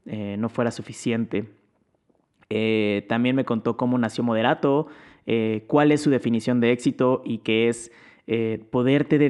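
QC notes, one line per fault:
No fault to note in this clip.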